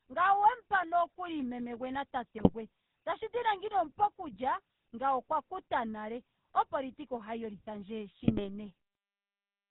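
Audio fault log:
throughout, GSM full-rate codec: the speech has a buzzy, gravelly roughness, and nothing comes through above 4 kHz. This fits the 13 kbps GSM full-rate coder, which rebuilds the voice from a vocal-tract filter driven by sparse, regularly spaced pulses.
2.38–2.50 s and 8.20–8.49 s, GSM bit errors: just after "nokuli meme gwe na", and again near the end, the speech briefly breaks into squawks, pops and gargling. Flipped bits corrupt the decoder's filter, pitch and gain values, warping the spectrum and level.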